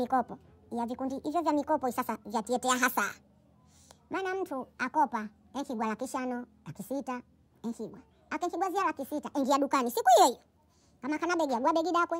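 From start to end the speech plays 1.5 times too fast and about 7 semitones high, the sound of a wrong sample rate, which fits 32 kHz audio played at 48 kHz. Unlike a pitch shift or time-stretch, tempo and pitch rise together.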